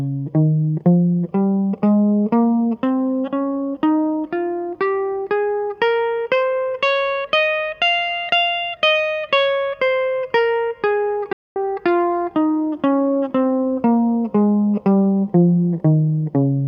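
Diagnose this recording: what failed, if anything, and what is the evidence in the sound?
The music cuts to silence from 11.33 to 11.56 s, about 230 ms, then resumes: a playback stall, likely the player starved of buffered data.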